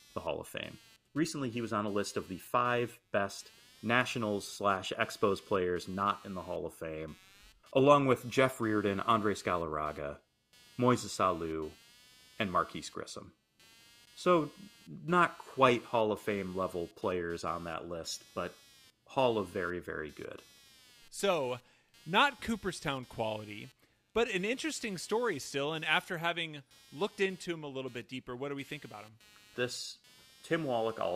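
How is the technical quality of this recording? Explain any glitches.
The recording is marred by one persistent fault, computer activity noise, which runs for the whole of the speech.

From start to finish, changing load in the computer (processor, graphics or mouse activity) shifts the ground that the audio circuit shares with it, so those fluctuations leak into the signal path. The result is a buzzy, chirping pulse train at roughly 200 Hz, sitting around 30 dB below the speech. It rises and falls with the machine's work rather than with the talking.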